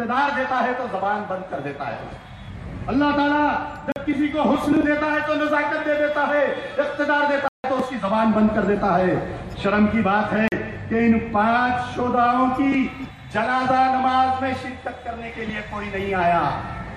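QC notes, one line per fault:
3.92–3.96 s: block of digital silence. A 40 ms stretch drops to silence with no fade, and it is heard as a short gap.
7.48–7.64 s: block of digital silence. A longer 160 ms block is silenced, which is heard as a hole.
10.48–10.52 s: block of digital silence. Another 40 ms dropout with hard edges.
The 40 ms multiples point to output buffers not being filled in time.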